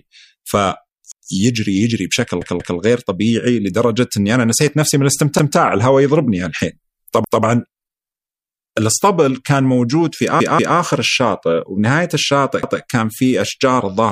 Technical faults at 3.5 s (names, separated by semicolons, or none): none